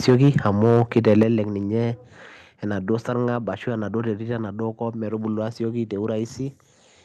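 Microphone overload runs from 0.08 to 1.23 s of this speech recording. The loudest peaks are flattened at the converter's ceiling, with the signal driven about 6 dB past full scale, so a small share of samples is clipped. That gives the strongest syllables a harsh, crackling edge, most likely because the input level was set too high. Microphone volume stepped down is heard three times, as abrupt drops in the level of both voice and background: at 0.1 s by about 2 dB, at 1.23 s by about 6 dB, and at 3.36 s by about 2 dB. The first two fall during or right at the end of the distorted stretch. The pattern points to call software likely detecting the clipping and cutting the device's input volume in single steps, with the largest cut ending the overload.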